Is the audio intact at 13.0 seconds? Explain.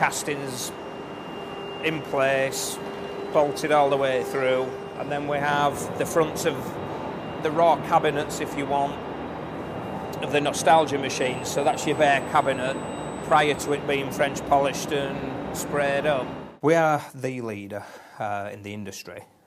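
No. At 13.0 s a USB whine sounds, from 11.20 to 13.77 s. USB frame traffic leaks through power or ground, adding a steady 8 kHz tone about 25 dB below the sound.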